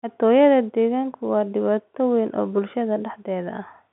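No technical faults can be heard anywhere in the speech. It comes through a G.711 telephone path, so the sound stays within the line band of about 150 Hz to 3.5 kHz with nothing above 3.8 kHz, and the coding leaves at most a faint trace.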